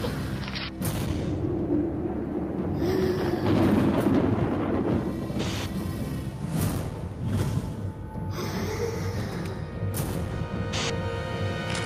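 No technical faults are audible anywhere in this audio.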